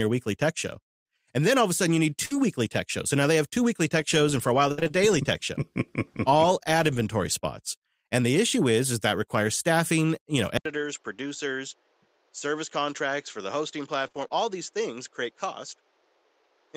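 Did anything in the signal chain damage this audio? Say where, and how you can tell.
Yes. There is damage in several places, all in the call path.

Scattered short gaps, 2.25 to 4.91 s, between "a sudden you need" and "daily tech show". This is a network fault. Around five brief dropouts, the longest roughly 70 ms, each patched by the receiver extending the preceding sound. About 150 ms is filled in, near 7% of the stretch. You hear isolated ticks and small smears while the speech stays clear.

Input switched to a poorer device, from 10.57 s to the end, right after "requires staffing you know". An 80 ms silence marks the change. Afterwards nothing passes above 7.6 kHz, the level falls about 5 dB, and a new noise floor appears roughly 35 dB under the speech. That narrower, duller sound with its own hiss most likely comes from the capture stage moving to another microphone or a headset call profile.

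Lost packet rebuilt from error correction, 10.69 to 10.87 s, just after "requires staffing you know". This is the network and codec stage. Five packets went missing, but each following packet carried a low-bitrate copy, so the decoder played those instead of leaving holes. There is no gap. Instead there are 100 ms of coarser, noisier speech.

Repeated packet loss (robotic sound), 14.03 to 14.33 s. This is also the network stage. Three losses land close together, 60 ms missing in all, the longest 25 ms. Concealment covers 20% of this window, rebuilding around a tenth of a second by extending earlier audio. Because the holes follow each other so quickly, the patches stack up into a choppy texture with pieces missing.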